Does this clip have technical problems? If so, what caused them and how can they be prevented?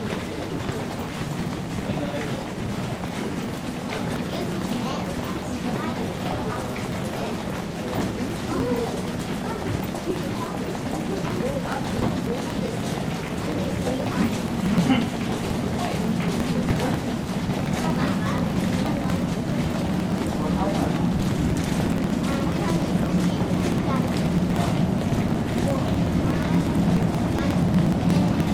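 Yes. Periodic USB or driver dropouts run from 0.08 s to 28.46 s, repeating every 0.06 s, about 17 times a second. Each time, something stalls the USB bus or audio driver and a few milliseconds of sound are skipped outright, so the waveform jumps and hundreds of evenly spaced ticks sound wherever signal is present. Prevent this by disabling the background task or power-saving feature that interrupts the bus and raising the driver buffer size.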